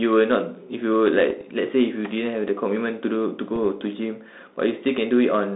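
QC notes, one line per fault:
1.30–1.41 s and 3.56–3.59 s: bit errors on an ADPCM link. Pops, rough bursts and brief level jumps. Each flipped bit throws off the decoder's step size and predictor, so the damage rings on for milliseconds. The shorter second burst is denser, fitting a higher error rate.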